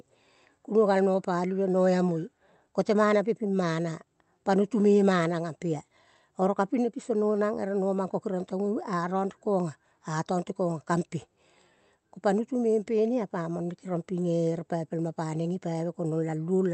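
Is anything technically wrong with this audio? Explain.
No, nothing is technically wrong with this audio.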